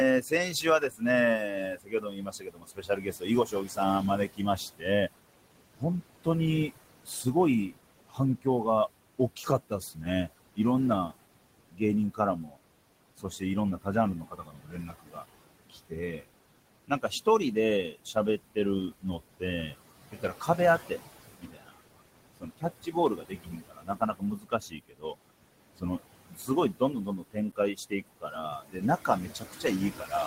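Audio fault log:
throughout noise suppressor artifacts: the suppressor pulls suspected noise bands down by about 21 dB frame by frame, so the room noise, about 14 dB below speech, pumps between phrases.
0.21–5.09, 5.77–8.65, 9.18–11.14, 11.7–12.62, 13.17–16.27, 16.88–25.15 and 25.76 s to the end: speech cut by the noise suppressor. The suppressor mistakes quiet speech for noise and lowers it by about 21 to 22 dB, so soft consonants and word endings sound swallowed. The stretch from 16.88 to 25.15 s loses about three seconds in total.
27.52 s: underrun with held sample. The output buffer runs dry and the converter holds its last value for 7.48 ms, a brief flat dropout. Playback picks up where it stopped, with almost nothing lost, so there is barely a click.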